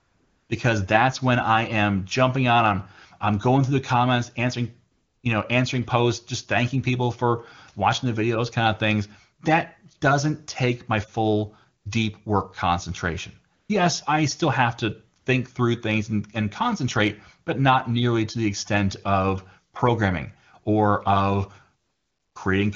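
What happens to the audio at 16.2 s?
Nothing goes wrong at 16.2 s; the speech carries on intact there, passing cleanly through the AMR wideband (HD Voice) codec at its highest rate of 23.85 kbit/s with no audible coding damage.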